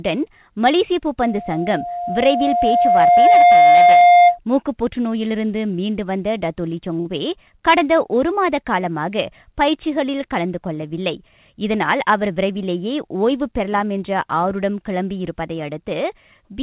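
Right at 1.19 s a loudspeaker feedback squeal starts up: the mic is hearing the speaker it feeds, and at around 706 Hz the loop gain tops one, so that tone keeps feeding itself. You can hear it swell over roughly two seconds into a steady whistle sitting about 10 dB above the speech, and it hangs on until 4.39 s, when it drops away.

At 7.0 s there's a short stall from a late packet. The jitter buffer ran dry waiting for it, so the receiver stretched the last bit of sound for about 52 ms until the packet showed up, then carried on from the same spot. Nothing is lost, but that moment is held a touch too long, with a slight buzz or dip, and everything after sits about 52 ms later.

From 11.54 s to 12.55 s you get a jitter buffer speed-up. The buffer had built up more audio than it wants, so the receiver trimmed out small pitch-period chunks, something like 70 ms in total, to pull the delay back down. 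The speech runs at about 105% speed with the pitch unchanged, so that second sounds a little rushed. Through all of it the audio stays band-limited with nothing above 4 kHz, which fits a narrowband telephone codec such as G.711 on the call path.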